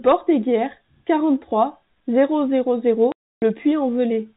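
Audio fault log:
3.12–3.42 s: packet loss filled with silence. A 300 ms hole cuts the speech, which fits a run of lost 20 ms packets replaced by silence. The waveform drops flat with abrupt edges, and the spectrogram shows a blank vertical gap across the telephone-band G.711 content.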